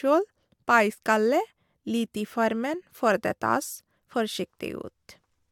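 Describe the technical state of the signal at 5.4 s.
At 5.4 s the signal is intact, with no dropout, distortion, clipping or other fault to be heard.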